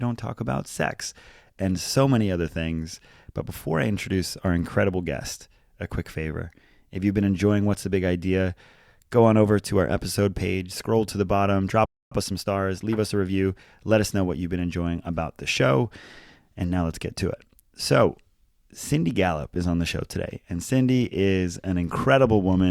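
At 11.85 s, right after "scroll to the bottom", the speech cuts out mid-flow in a playback stall lasting about 258 ms, until 12.12 s. The gap is dead silence rather than a pause. The likely cause is that the player's buffer ran dry or its audio thread was blocked. On a waveform the trace drops abruptly to a flat line. A spectrogram shows a clean vertical band empty at every frequency, with hard edges on both sides.

From 12.12 s to 13.82 s, ending just before "let us know what", the speech runs about 1.15 times faster while keeping its normal pitch. This is time-compressed catch-up: the player trims its backlog by removing tiny slices and cross-fading the joins. The result sounds hurried. On a spectrogram the harmonics stay at their usual heights but syllables sit closer together, and the waveform shows compressed spacing between speech bursts.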